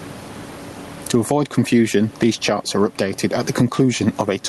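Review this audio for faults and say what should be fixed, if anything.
Gain pumping runs through the whole clip. The room noise sits about 32 dB below the speech, and the gain swings by roughly 15 dB. The likely cause is microphone gain set far too high, with a fast limiter or compressor clamping it on each peak. To prevent it, lower the input gain so peaks stay below the limiter threshold, and slow the attack and release.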